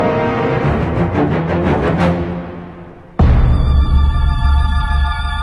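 From 0.0 to 2.0 s the sound is dull and muffled, its treble sloping smoothly away to about 8 dB down at 10 kHz: de-emphasis applied wrongly, cutting highs that were never boosted or cutting them twice.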